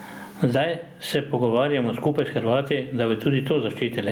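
A speech clip with gain pumping across its whole length, a gain swing of around 25 dB. Loud and soft passages sit unnaturally close in level, giving a squashed sound. This is likely a fast limiter or compressor clamping down on a preamp set far too hot. Unlike a noise gate, gain pumping tends to raise the floor in the gaps rather than cutting it to silence.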